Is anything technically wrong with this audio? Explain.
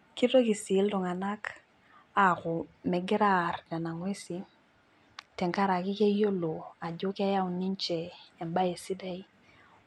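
No, nothing technical stands out in this speech recording, so there's nothing here to flag.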